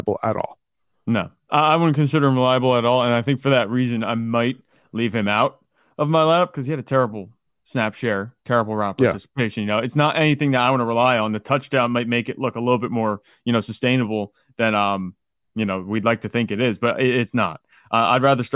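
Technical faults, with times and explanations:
No technical faults can be heard in this speech clip.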